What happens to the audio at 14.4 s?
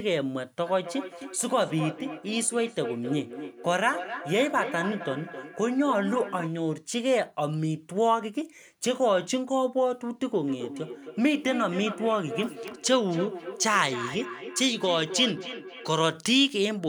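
At 14.4 s the speech is caught in a feedback echo between two devices, which runs from 10.45 to 15.92 s. A second device in the same room plays back the call, the first microphone picks that up again, and neither echo canceller removes sound from the other device. The sound returns at a fixed spacing of roughly 300 ms, peaking about 11 dB below the speech. Room reverberation would instead blur smoothly, with no distinct, evenly timed repeats.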